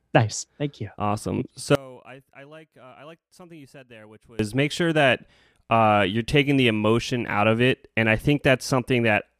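From 1.75 s to 4.39 s the speech collapses to a faint residue, about 27 dB below the surrounding level, before recovering just ahead of "make sure that uh". This is most likely one channel inverted: with one side's polarity reversed, the centred voice and its low end cancel when the two channels are summed to mono, leaving only the small difference between them audible for that stretch.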